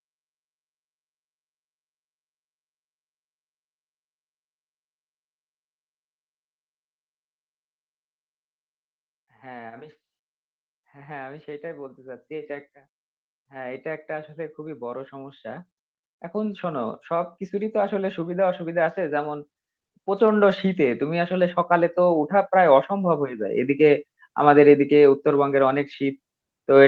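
From 10.92 to 12.76 s, automatic gain rising lifts the level about 4 dB. From 16.32 to 23.35 s it climbs about 14 dB. The gain control judged the input too quiet, so speech and background swell together.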